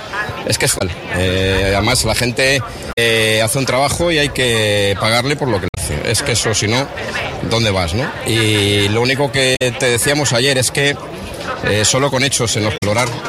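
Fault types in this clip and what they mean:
damaged data in a compressed stream: corrupted bytes make the decoder misread frames and resynchronise, giving five brief chirps or blips of 70 to 120 ms at 0.75, 2.89, 5.66, 9.52 and 12.74 s. A spectrogram shows short vertical smears, and the waveform shows abrupt discontinuities.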